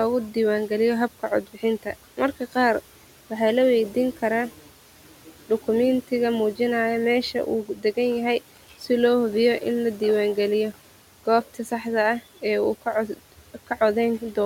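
Speech with the noise suppressor cutting into it four times, 0.34–2.54 s, 3.94–6.6 s, 7.34–8.88 s (just before "lohubiyo in ladiwan galiyo") and 12.41–14.37 s, mistaking soft bits for noise and pulling them down about 12 dB, so they sound swallowed.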